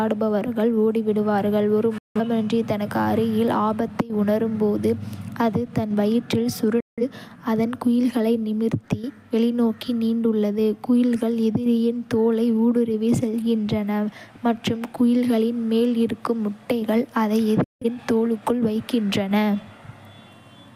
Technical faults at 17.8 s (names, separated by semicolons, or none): digital broadcast dropout